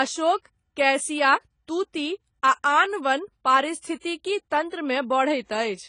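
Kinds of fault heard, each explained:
AAC compression: Throughout, the speech sounds dull and smeared, with a watery, fizzy edge on sibilants and sustained vowels, and nothing at all above 10 kHz. This is likely lossy coding that quantises each frame's frequency lines coarsely against a hearing model, and damage this plain fits a low bitrate around 24 kbps. On a spectrogram the energy stops at a flat ceiling near 10 kHz, with blurred smears in the upper bands.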